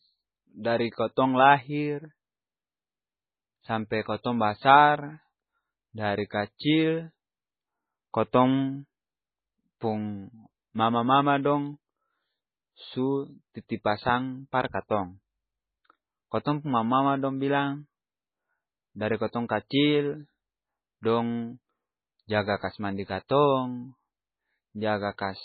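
From start to finish the speech has heavy damage that sounds like MP3 compression, likely from the encoder. Nothing gets through above about 4.5 kHz, so the top end is gone and everything sounds dull and boxed in. The damage is bad enough to point to a starved bitrate, something around 16 kbps, where the coder throws out weaker frequency lines that then flicker in and out between frames. That leaves a watery, swirling texture, with smeared consonant attacks.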